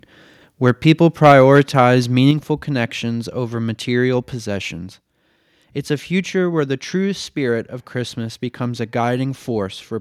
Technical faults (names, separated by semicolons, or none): microphone overload; microphone volume stepped down